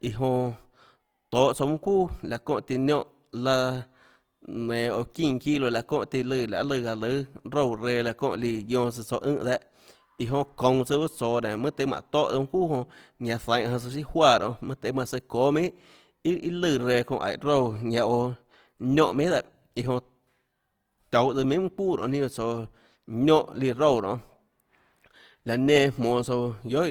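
Across the whole clip the speech has a rough, grainy texture, with a noisy fizz where clean detail should be, though the top end still reaches about 20.4 kHz rather than sounding narrowed. This is Opus compression, likely in its music-oriented CELT mode at a low rate, consistent with roughly 24 kbps. When the encoder runs short of bits, it fills bands with folded or noise-like content instead of leaving gaps, so the damage is clearly audible.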